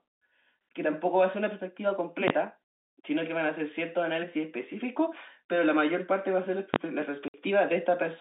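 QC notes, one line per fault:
2.28–2.30 s and 6.74–6.76 s: invalid numbers at full scale. A calculation blew up to infinite or invalid values, and each 20 ms block got pinned flat at one extreme value. A block that short collapses into a single sharp bang at each spot.
7.28–7.34 s: packet loss filled with silence. There's a 60 ms hole in the speech where the receiver had nothing to play and output silence instead. Its length fits three consecutive 20 ms packets going missing, and the abrupt cut in and out gives hard edges. This sits on a G.711 telephone line, audible in the narrow 200 to 3.7 kHz band.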